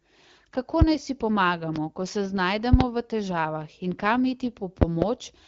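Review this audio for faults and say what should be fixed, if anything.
Loud pops sit on top of the speech at 0.82–0.84 s, just before "naj si", and at 1.76–1.79 s, just before "ko se". Double pops follow at 2.73–2.84 s, after "ko se", and at 4.82–5.05 s. Each peaks roughly 20 to 25 dB above the speech. A likely cause is sudden voltage pulses from a plug, switch, static or driver glitch. Securing connectors and grounding the equipment should prevent them.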